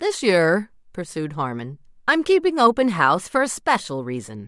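Nothing in the recording stands out as a technical fault, so there's nothing to flag here.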